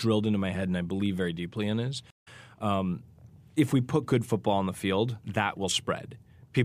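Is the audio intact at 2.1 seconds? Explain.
No. Just after "very deeply in is", the speech drops out from 2.10 to 2.28 s: about 105 ms of dead silence, then the audio comes back slightly ahead of where it left off, skipping roughly 50 ms before "um if we put". This is a stream reconnect. The connection broke, the player fell silent, then reconnected and started a new decoder mid-stream, joining the stream at a later point and easing in on its first frame.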